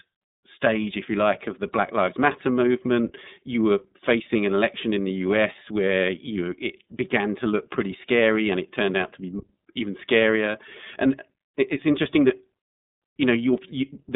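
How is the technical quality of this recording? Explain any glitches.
The recording runs through a narrowband voice codec for its whole length, so the quality is phone-grade. Throughout the clip you can hear the iLBC codec at work. Nothing gets through above 3.8 kHz, and the usable band sits roughly between 150 Hz and 3.7 kHz. Each 30 ms frame's excitation is coded on its own, which fits the 13.33 kbps mode. The codec damage is plainly audible, leaving the speech sounding rough and synthetic.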